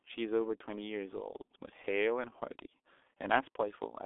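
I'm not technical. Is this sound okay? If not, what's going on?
No. G.723.1 codec damage, throughout: an old internet-phone codec squeezes the speech heavily and drops everything above about 3.8 kHz, so it sounds muffled and hoarse with smeared consonants.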